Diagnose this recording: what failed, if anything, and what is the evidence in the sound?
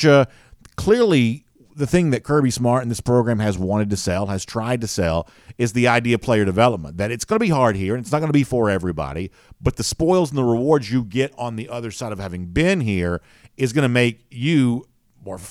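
Nothing failed; no faults are audible in this speech.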